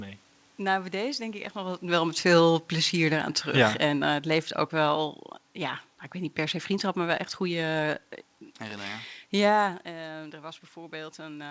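From 1.84 to 5.1 s, automatic gain falling: reacting to a too-loud input or strong background noise, the gain eases down about 5 dB, so speech and background sink together.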